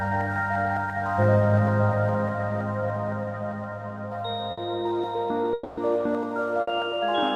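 At 4.51 to 4.60 s, a burst of packet loss drops a run of packets, and the receiver stretches the last sound over the hole for about 60 ms, fading it as a brief held buzz or hiss before the audio resumes with about 60 ms skipped. From 5.53 to 5.80 s, a long network dropout is the likely cause of a 240 ms stretch where the previous sound is drawn out and fades without falling to silence, after which about 240 ms of audio is gone. A second burst of packet loss at 6.61 to 6.70 s repeats the earlier pattern, with a 60 ms fading fill and 60 ms missing.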